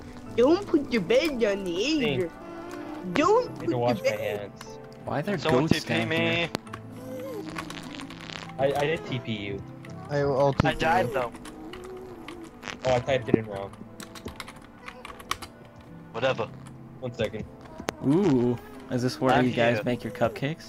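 Six loud pops break through the audio, at 3.16, 5.71, 6.55, 10.60, 13.34 and 17.89 s. Each is a single sharp thump lasting about 22 ms and peaking roughly 25 dB above the surrounding signal, which continues beneath it. The likely cause is brief voltage transients from a switch, connector, static discharge or driver glitch.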